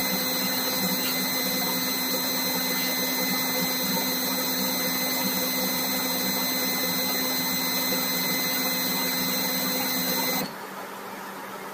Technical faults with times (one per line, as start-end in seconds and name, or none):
none